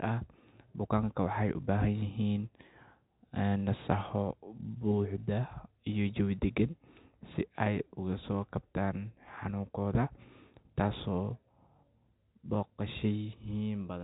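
No technical faults are audible.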